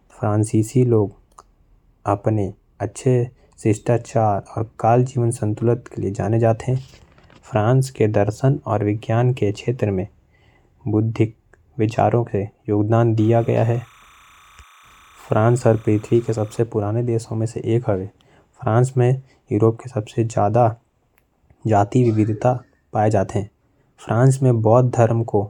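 From 13.18 to 16.59 s, timecode bleed from a neighbouring track or cable adds a faint chirping warble, about 30 dB down, shown on a spectrogram as paired lines near 1 and 2 kHz.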